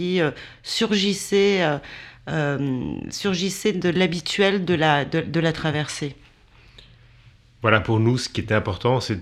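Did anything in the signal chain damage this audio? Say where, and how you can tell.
No, I can't hear anything in this one that points to damage at any stage of the chain, so there's nothing to chase down here.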